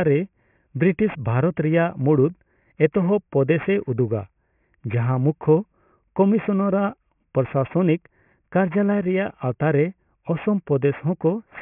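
Aliasing runs through the whole speech clip. It sounds resampled without filtering, which fits a drop to 6 kHz. Content above 3 kHz folds back to false pitches, about 25 dB down. Sibilants turn gritty and metallic, crowding the band up to 3 kHz.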